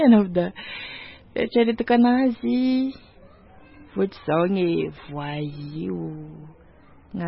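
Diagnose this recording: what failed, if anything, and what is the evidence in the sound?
The codec stage likely failed through MP3 compression starved of bits, at a rate that points to roughly 17 kbps. Throughout the speech nothing is left above 5.6 kHz, and the damage is heavy: weak frequency lines drop in and out between frames, giving a watery, swirling texture and smeared attacks.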